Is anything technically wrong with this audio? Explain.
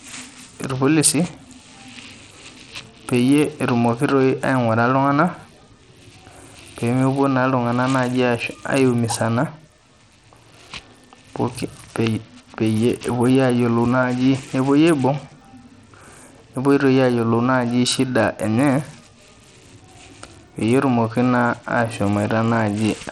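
Yes. Throughout the speech, the treble flickers in and out and a gritty noise rides on the sound, which is most likely Bluetooth SBC compression at a starved setting, consistent with a bitrate near 80 kbps. With so few bits, the upper sub-bands get little or nothing and the rest are coarsely quantised. On a spectrogram the top end looks patchy, with blocks switching on and off, and aliasing smears across band edges.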